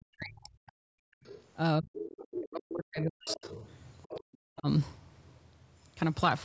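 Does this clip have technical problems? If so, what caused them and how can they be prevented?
Yes. Speech suppressed in double talk appears from 0.0 to 0.74 s, 1.79 to 3.64 s and 4.44 to 4.67 s, where the talker dips by up to about 40 dB or breaks into pieces. The likely cause is an echo canceller that could not separate the talker from loudspeaker echo while both sides spoke, so it turned everything down. Unlike gating, the speech itself drops. A headset or a canceller with better double-talk detection prevents this.

Background gated by the echo canceller occurs from 1.02 to 1.23 s. The room sound falls by about 40 dB while the loudspeaker plays, then returns when the canceller releases. What sets it apart is that the dropout hits the quiet room tone, not active speech. Gentler suppression settings or comfort-noise fill prevent it.

The other side's voice leaking through is heard at 1.24 to 1.44 s, 1.95 to 2.27 s, 3.26 to 3.74 s and 4.02 to 4.35 s, sitting about 10 to 20 dB below the talker. 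It is likely residual loudspeaker echo the canceller failed to remove. Unlike suppression, this adds a second voice rather than removing sound. Using headphones or lowering loudspeaker volume prevents it.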